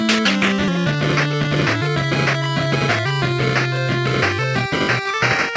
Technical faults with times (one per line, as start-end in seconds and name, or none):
0.68-0.70 skip ahead
0.78-2.67 jitter buffer speed-up